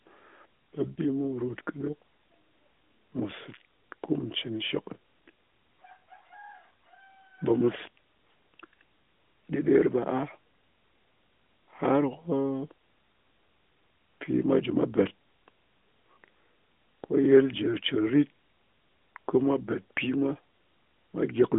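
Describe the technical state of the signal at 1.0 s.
A single lost AMR speech frame falls just before 1.0 s, between about 0.95 and 0.99 s. The damage points to one 20 ms frame rejected on its checksum, so the decoder filled the gap by repeating the previous frame's pitch and vocal tract parameters at reduced gain. The result is a brief dip or warble before normal decoding resumes, heard through the narrowband 200 Hz to 3.5 kHz line, with AMR-NB running at 12.2 kbps.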